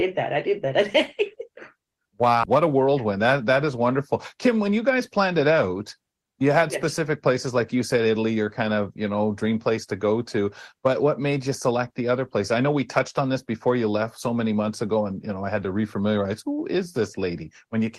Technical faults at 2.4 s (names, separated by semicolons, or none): skip ahead